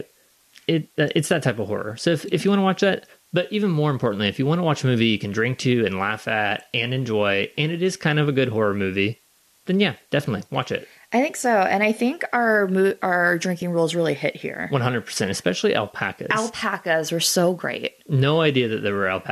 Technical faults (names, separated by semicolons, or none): low bit depth with dither; AAC frame loss with concealment